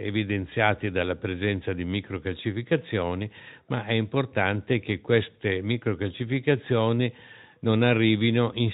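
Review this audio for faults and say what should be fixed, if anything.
Nothing in this speech recording stood out on listening as needing a fix.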